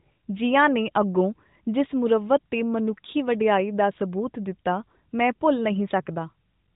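No faults are audible in this speech at any point.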